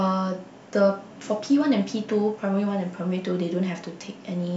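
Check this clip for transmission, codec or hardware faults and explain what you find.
Nothing stood out on listening to the clip.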